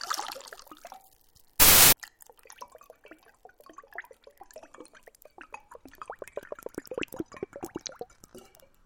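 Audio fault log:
1.60–1.93 s, wrong sample width: a burst of loud, harsh noise with the underlying sound faintly audible, raised in pitch and running 1.33 times fast, which fits packed 24-bit data read as 32-bit samples. Each read straddles neighbouring samples, so most values are scrambled and only occasional ones keep the true top bits. The noise sets it apart from a plain sample-rate error, and the speed shift sets it apart from swapped byte order.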